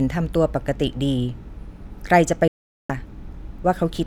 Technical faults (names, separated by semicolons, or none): digital broadcast dropout